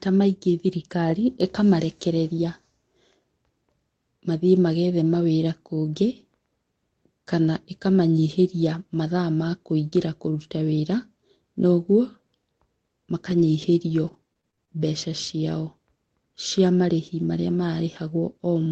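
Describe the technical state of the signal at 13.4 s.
At 13.4 s you're inside a burst of repeated packet loss that sounds robotic, running from about 13.29 to 14.70 s. Six short gaps turn up, the longest around 25 ms, and each one gets patched by stretching the last bit of sound, roughly a tenth of a second rebuilt in all. That's what gives the speech its choppy, robotic texture there, on top of the Opus call path's 8 kHz top end.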